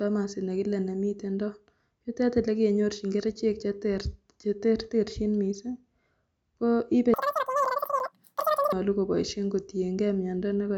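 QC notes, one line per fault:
7.14–8.73 s, wrong sample rate: after "ko ibe" the speech runs 2.76 times fast and 17.6 semitones high, which fits 16 kHz audio played at 44.1 kHz.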